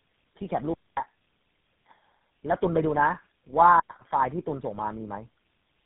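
Speech, and the whole clip carries tandem speech coding. It sounds rough, muffled and warbly all the way through, worse than a single phone codec would leave it, and nothing comes through above about 3.8 kHz. That stacked damage points to roughly four low-rate speech coders in a row, something like AMR-NB followed by repeated GSM full rate hops with G.711 links between them, each one re-encoding the previous coder's already degraded output.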